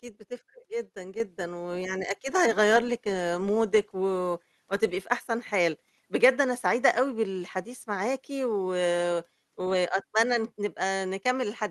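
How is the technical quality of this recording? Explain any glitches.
The main glitch is a microphone volume step-up at 1.2 s. The call software decided the mic was too quiet and raised the device's input gain in one jump of about 7 dB. Because the gain change happens before any processing, the voice and the room noise get louder together. You hear it as a sudden lift in level that then stays put, with no fade or ramp. The audio also went through a WebRTC call path, and you can hear the Opus coding texture and the top end rolling off around 12 kHz, which fits a modest bitrate of around 24 kbps.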